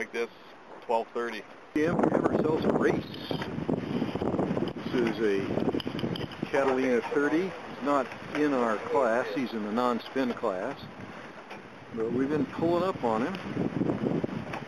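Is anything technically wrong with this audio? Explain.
No, nothing is technically wrong with this audio.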